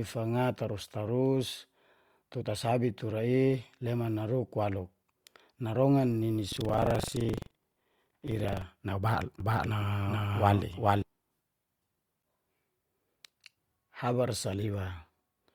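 From 6.49 to 8.66 s the speech carries a robotic rattle at a steady 23.4 Hz, present only while there is sound. This is buffer tearing, and the rate fits a 2048-sample buffer. The writer and reader have slipped, so a small slice of each period replays audio from roughly a tenth of a second earlier, with hard joins either side.

Between 9.40 and 11.02 s a full-strength copy of the speech trails the original by roughly 0.4 s, dry and uncoloured, starting and stopping abruptly. This doubled audio track likely comes from a second, slower capture path or an edit that left two misaligned copies mixed together.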